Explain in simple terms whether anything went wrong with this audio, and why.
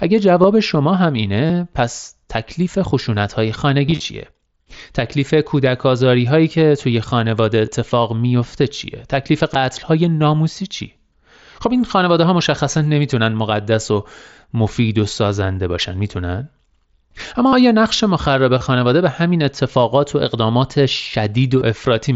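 Concealed Bluetooth headset packet loss occurs at 0.42, 1.46 to 1.50, 3.87 to 4.00, 7.66, 9.54, 17.48 to 17.53, 18.58 to 18.61 and 21.59 to 21.61 s. Audio between headset and phone went missing, so the phone patched each gap by repeating a recent snippet. The brief ones are nearly hidden. Longer ones, up to about 45 ms at 17.5 s, turn briefly buzzy.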